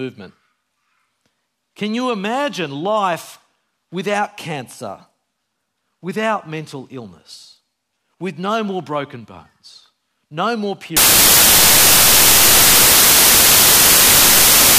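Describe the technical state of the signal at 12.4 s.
At 12.4 s the signal is inside a span of samples built from the wrong bytes, running from 10.97 s, just after "broken bones no more", to the end. Misassembled byte order promotes fast-changing low bits to high significance, producing loud, harsh broadband noise, close to white on loud sounds.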